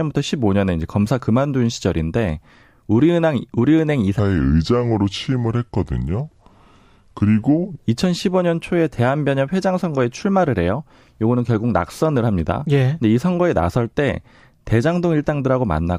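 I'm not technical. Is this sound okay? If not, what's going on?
No. From 4.19 to 7.78 seconds there is a section at the wrong speed. The speech plays at about 0.77 times normal speed, so it sounds slow and deep, roughly five semitones lower. It was likely played back against the wrong clock.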